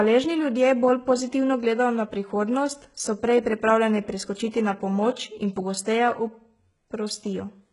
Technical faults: HE-AAC compression

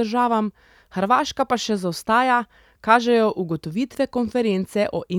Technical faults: none

